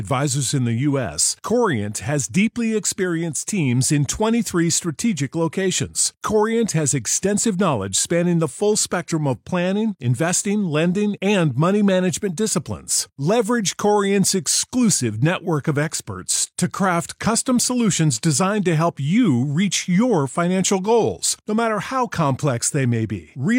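No technical faults are audible in this speech.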